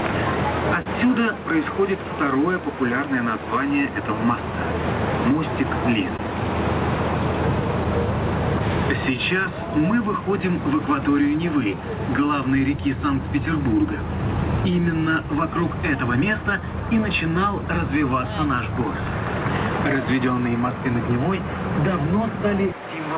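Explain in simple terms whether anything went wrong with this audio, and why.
The audio has three timing faults. There is clock drift between sender and receiver: the sender's clock runs roughly one and a half percent slow, so the receiver's buffer keeps running short throughout.

Two short stalls from a late packet occur, at 0.82 to 0.88 s and 6.17 to 6.21 s. Each time, the buffer emptied and the last sound was held for 38 ms and 16 ms, with nothing lost.

Repeated timing corrections run from 2.12 to 6.28 s at 99% speed, adding roughly 70 ms, and from 9.04 to 22.39 s at 98%, adding roughly 0.3 s. In both stretches, small repeated pieces pad out the sound.

The call path itself cuts everything above 4 kHz, as its codec does.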